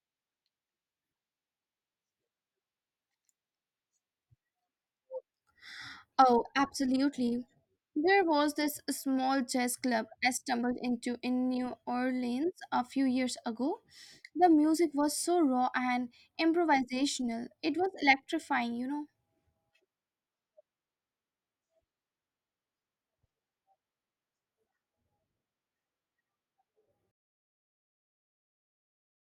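From 27.11 s to the end at 29.31 s, the speech fade-out picks up truncation distortion on the fade. The level is stepped down with only about 7 bits and no dither, so the tail goes gritty and square-edged.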